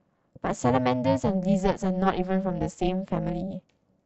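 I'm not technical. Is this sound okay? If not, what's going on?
No, it isn't. From start to finish the speech has an overlap-add ripple: its loudness pumps up and down about 400 times a second, dipping almost to silence on every cycle. That's fast enough to sound like a harsh, metallic buzz over the speech. It happens when audio is chopped into short overlapping slices and stitched back together with overlaps that don't blend evenly, so each seam leaves a dip in level.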